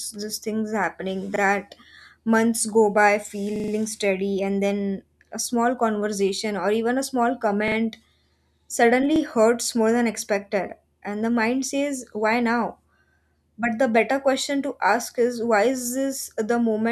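Repeated buffer stutters occur in this speech clip at 1.36 to 1.40 s, 3.56 to 3.72 s, 7.68 to 7.76 s and 9.16 to 9.20 s. Each time, one short slice of audio plays again, with a hard join at each repeat. It sounds twice at the first and last points, three times at 7.68 s and five times at 3.56 s. The slice length fits a 40 ms buffer that was replayed when fresh audio arrived late, and little or no audio is lost.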